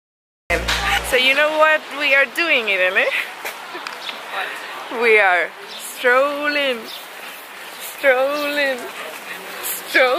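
The capture began late, after the sound was already under way, which produced a cut-off start: the first 0.5 s holds only digital silence, and at 0.5 s the audio jumps in partway through a sound. Because recording picked up mid-event, there is no natural onset or gradual rise, so the opening lands abruptly, as if the beginning had been clipped away rather than played.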